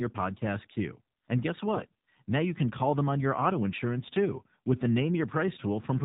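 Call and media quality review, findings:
AMR narrowband mobile codec, whole clip: speech band-limited to 4 kHz, buzzy and synthetic, which fits a low AMR-NB mode around 7.4 kbps. Plainly audible vocoder damage.

AMR bit errors, 1.74–1.89 s: pitch and level hold, but the speech goes hoarse and gargly. Points to heavy bit corruption on a weak radio link, with pulse positions and gains landing wrong.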